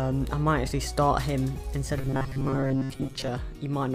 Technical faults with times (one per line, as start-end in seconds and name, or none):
1.99-3.30 robotic sound from repeated short buffers